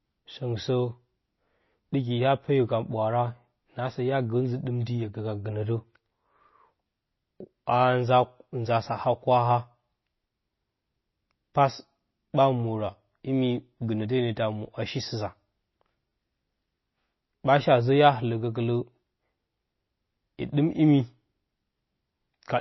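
MP3 compression damage runs through the whole speech recording, plainly audible throughout. Nothing reaches above 5.8 kHz, and the sound turns watery, which fits a likely MP3 encode near 24 kbps: starved of bits, the encoder cut the treble and let weak frequency lines flicker between frames.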